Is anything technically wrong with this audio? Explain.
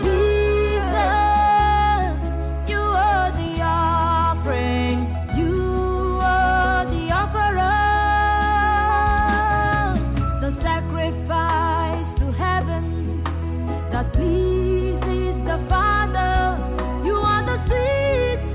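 No, nothing technically wrong can be heard here.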